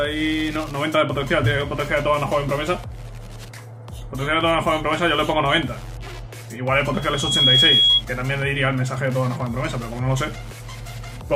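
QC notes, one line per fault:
6.94–8.03 s, loudspeaker feedback squeal: the microphone is picking up its own loudspeaker, and at 3.3 kHz the loop gain tops one, so that frequency feeds on itself. A single tone swells over about half a second to roughly 10 dB above the sound, then stops.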